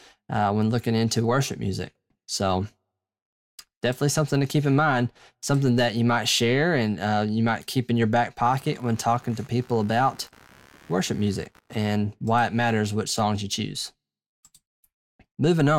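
Shifting processor or graphics load on the computer disturbed the ground it shares with the audio circuit, causing computer activity noise from 8.43 to 11.77 s, between "keep in your back" and "why it matters which". It sounds like a buzzy chatter of around 70 pulses a second, roughly 30 dB below the speech.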